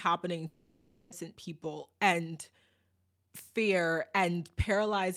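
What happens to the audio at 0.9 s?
At 0.9 s you're inside a long network dropout spanning 0.47 to 1.14 s, likely from packets not arriving. The receiver smears the last sound into a fading buzz for about 0.65 s. About 0.4 s of speech is lost, and the speech returns roughly a fifth of a second late.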